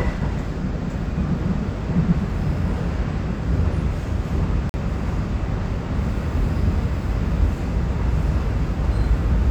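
Everyday sound with a corrupt frame muted from 4.69 to 4.84 s: corrupted compressed frames were rejected by the decoder and replaced by silence, leaving an abrupt 0.14 s hole consistent with four lost frames.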